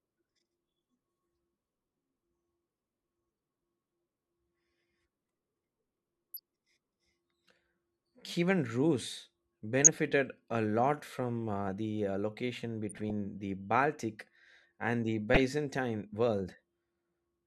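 Speech with DAB burbling at 6.34–6.39, 9.84–9.99, 12.89–13.10 and 15.34–15.47 s. Residual bit errors corrupt MP2 frames, showing as isolated sub-band blocks flaring on the spectrogram.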